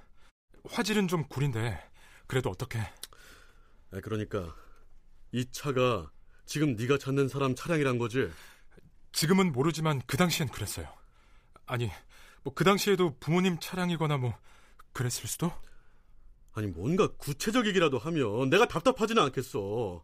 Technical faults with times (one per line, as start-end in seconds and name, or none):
none